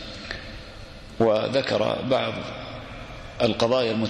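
No technical faults can be heard at any point in this audio.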